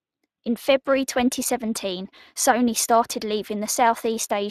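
From start to finish the speech carries plainly audible Speex codec damage: the excitation is coded coarsely, leaving a hoarse, noisy roughness over the voice rather than the swirling, watery smear of transform codecs. Nothing sounds above 15.4 kHz, which fits a mid-rate ultra-wideband setting around 22 kbps.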